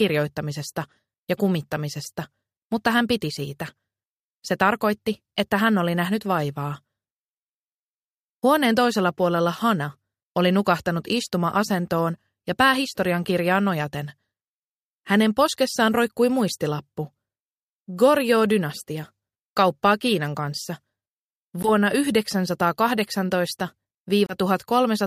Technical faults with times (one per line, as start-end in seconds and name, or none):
21.63-21.69 Bluetooth dropout
24.26-24.35 Bluetooth dropout